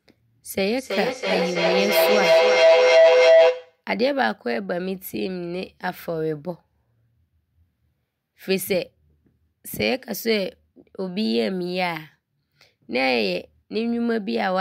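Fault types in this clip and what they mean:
Feedback howl: a microphone is picking up its own loudspeaker output, so each pass around the loop comes back louder instead of dying away, and the sound narrows to whatever frequency the loop favours. Here it kicks in at 0.55 s and rings until 3.85 s as a tone around 700 Hz, pulsing roughly every third of a second with the loop delay, and peaking about 9 dB above the speech.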